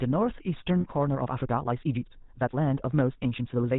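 A speech clip carrying plainly audible GSM full-rate codec damage throughout: a buzzy, gravelly roughness, with the spectrogram showing nothing above 4 kHz, which points to the 13 kbps full-rate coder. At 0.80 to 0.85 s, lost GSM frames leave a brief metallic ring; the spectrogram shows a smeared, repeated band pattern for 40 ms, which fits two 20 ms frames. From 1.04 s to the end, the pace jumps to about 1.52 times faster with unchanged pitch, sounding rushed, likely from a time-stretched section; the waveform shows compressed, abruptly spliced segments.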